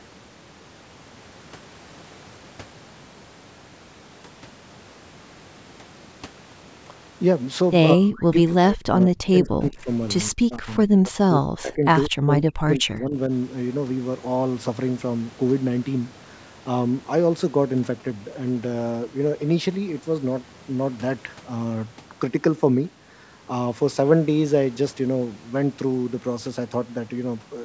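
Speech, band-limited by the call's microphone processing so that nothing reaches above 8 kHz, with three episodes of speech suppressed in double talk: 7.94 to 9.89 s, 10.31 to 11.86 s and 12.09 to 13.31 s. In each, the talker's voice sinks by as much as roughly 40 dB in pieces, totalling around a second and a half in the first episode and about a second in each of the others. The likely cause is an echo canceller that, with both parties talking at once, could not tell the near voice from loudspeaker echo and attenuated everything. A waveform shows the envelope collapsing in chunks, and a spectrogram shows the speech harmonics fading to near-empty gaps. A brief echo leak sits between the second and third episodes, at 12.04 to 12.08 s, where a faint scrap of the voice returns about 180 ms late at roughly 30 dB below the speech, likely residual loudspeaker pickup that the canceller failed to remove. 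On a spectrogram it is a weak repeat of earlier harmonic structure.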